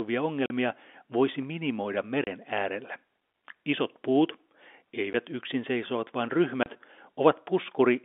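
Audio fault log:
0.46–0.50 s, 2.24–2.27 s (after "voisi minimoida"), 5.13–5.14 s (before "yksin seisovat vaan"), 6.63–6.66 s (after "yksin seisovat vaan"): packet loss filled with silence. Gaps of 40, 30, 10 and 30 ms, consistent with 10 ms packets, replace the speech with silence. Each shows as a flat, hard-edged break in the waveform and a blank vertical column across the G.711 telephone band on a spectrogram.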